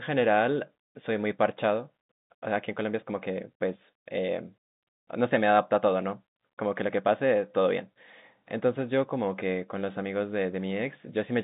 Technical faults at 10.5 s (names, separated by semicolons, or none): none